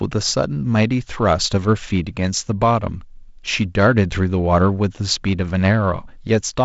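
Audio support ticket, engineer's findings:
Nothing stood out on listening to this speech clip; no findings to log.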